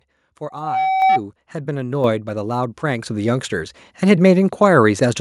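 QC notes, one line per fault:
1.02 s, 2.04 s, 3.06 s: microphone volume stepped up, by about 5 dB, 6 dB and 5 dB. The input gain was raised in discrete steps, so speech and background jump louder together. On the waveform the envelope widens abruptly at each point, and the spectrogram brightens evenly across all frequencies.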